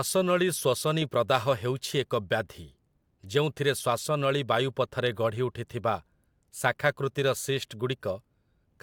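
Nothing in the speech recording points to a technical fault at any point.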